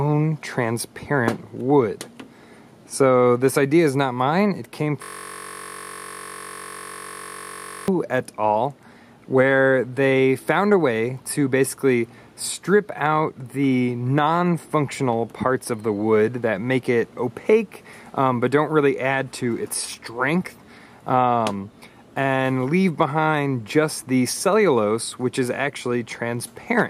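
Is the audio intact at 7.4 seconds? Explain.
No. A system hang loop runs from 5.03 to 7.88 s, so 7.4 s falls inside it. The machine or its driver stalled while the sound hardware kept replaying the same chunk of its ring buffer. A 21.33 ms slice, which fits a 1024-sample buffer, repeats exactly, well over a hundred times. Because the loop is so short, it becomes a steady buzz at about 46.9 Hz in place of the real audio.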